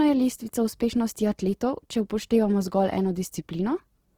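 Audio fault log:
throughout Opus compression: the speech sounds rough and grainy, with starved bands filled rather than left as the swirling spectral holes MP3 leaves, and the full bandwidth survives. This likely comes from Opus in its CELT music mode, which fits a starved bitrate near 16 kbps.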